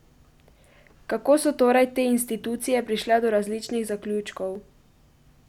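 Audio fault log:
4.55 s, overlap between stream segments: a single tiny skip in the speech, where the waveform jumps instead of continuing smoothly. About 3 ms of sound is missing. It happens at a join between delivered segments, here 6.0 s long. The time stamps of two neighbouring segments overlapped, so the player discarded the overlapping stretch as a duplicate even though that sound was never actually doubled, leaving the gap and the abrupt discontinuity.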